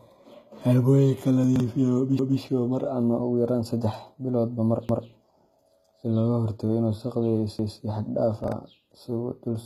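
Speech runs throughout with gritty, lispy sibilants and a metallic sheen in the treble, where copied-up harmonics fail to align with the real ones. That points to HE-AAC compression, likely at a low bitrate around 20 kbps. On a spectrogram the top band looks smeared and patchy, with nothing above 14.9 kHz. Two brief jumbled moments are chunks out of order. At 1.44 to 1.6 s a 40 ms chunk plays three chunks late, and at 8.44 to 8.52 s one plays a single chunk late. The waveform shows abrupt discontinuities at each hard join. Overlapping chunks cause a stutter at 2.19 s, just before "mar ama", at 4.89 s, right after "biloodba mar", and at 7.59 s. Each time 200 ms repeats at a join, spaced every 2.5 s, and the waveform shows a duplicated segment with a step where the chunks meet.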